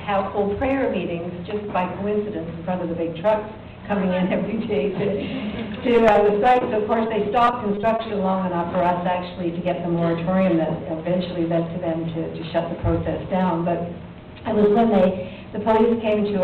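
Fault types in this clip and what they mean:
Short concealed packet loss: Three brief holes, at about 6.12 s, 6.53 s and 6.59 s, each around 20 ms of audio that arrived too late to decode. The receiver bridged each one by extending the preceding sound, pitched if voiced, shaped noise if not, then crossfaded back. Each is heard as a quick smear or wobble. On a spectrogram, harmonics run smoothly across where fine detail should change; the waveform shows a short, overly regular stretch.
Repeated packet loss (robotic sound): From about 7.07 to 8.07 s, seven separate gaps, none longer than 20 ms, were patched one after another, with about 140 ms concealed in total, roughly 14 percent of that second, and about 100 ms of real audio lost. The quick succession of synthetic patches makes the stretch choppy. A spectrogram shows repeated short blocks of frozen, smeared harmonics; the waveform shows small repeating segments at irregular points.
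Short stall from a late packet: At about 9.35 s the jitter buffer ran dry because a packet came about 20 ms late. The receiver held the last sound for about 20 ms, then resumed at the same point, so nothing was lost and the sound is simply drawn out. On a spectrogram this appears as a brief horizontal stretch of unchanging spectrum; the waveform shows a repeated cycle pattern lengthening that moment.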